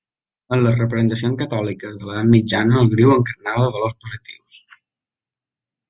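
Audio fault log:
Nothing stood out on listening to this speech recording.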